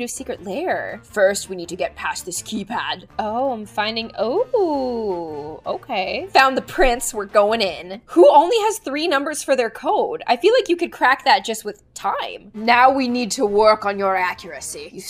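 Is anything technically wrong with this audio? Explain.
Yes. Clock slip clicks run from 0.15 s to 14.98 s, faint regular ticks roughly every 0.15 s, likely from two unsynchronised clocks about 150 ppm apart dropping or repeating single samples.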